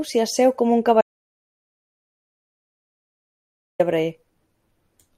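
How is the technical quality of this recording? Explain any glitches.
The recording has one serious glitch, an audio dropout to silence running from 1.01 s to 3.80 s that erases about 2.78 s of speech. The input was likely lost through a disconnected device, failed link or stray mute while silence kept being written. The speech cuts off abruptly and resumes mid-flow, with no room tone in the gap. On a waveform this appears as a dead-flat line, and on a spectrogram as a completely empty block across all frequencies.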